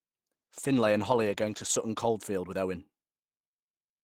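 Speech over a call where there's a call bitrate drop from 0.33 s to 3.37 s. The coding turns coarse and watery, and the top end dulls below the normal 12 kHz band. That fits Opus being pushed from around 40 kbps down to about 13 kbps, bottoming out for roughly 1.5 s before recovering.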